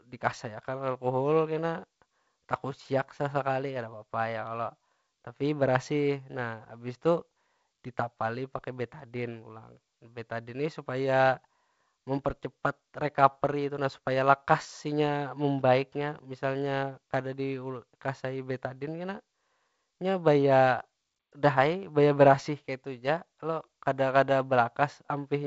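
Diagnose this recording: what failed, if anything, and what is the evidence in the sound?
Nothing has failed: the speech comes through G.722 wideband telephone coding, with no content above 7.7 kHz and the slight grain in the lower band that fits the codec's 48 kbit/s mode.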